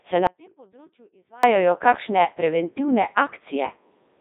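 From the start, the whole clip has passed through a Codec 2 vocoder. The speech sounds robotic and buzzy, with heavy damage even at the codec's 3.2 kbit/s mode. The waveform is rebuilt from sine waves, and the spectrogram shows a smeared harmonic comb confined to about 250 Hz–3.7 kHz, with nothing above 3.8 kHz.

From 0.27 s to 1.43 s there is an audio dropout to a faint residue. The sound cuts away abruptly for about 1.16 s and then returns on "kakšne preventivne". Only a faint trace around 30 dB below normal level remains, most likely because the signal was lost while the path stayed live. The waveform collapses to a thin line between sharp vertical edges.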